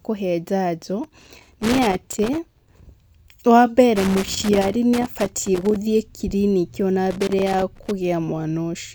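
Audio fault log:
1.04–2.83 s, 3.96–5.76 s and 7.11–7.91 s: loose connector crackle. Irregular bursts of scratchy crackle break up the speech. The second ends just before "kiriniki ona", and the third follows it. A worn or dirty contact is making and breaking, chopping the signal.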